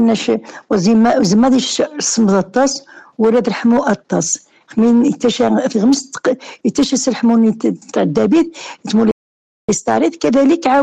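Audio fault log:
9.11–9.69 s, playback stall. The sound stops mid-flow and the output goes silent for about 0.57 s, then resumes. The likely cause is the player running out of buffered data, or its thread being blocked, until it recovered.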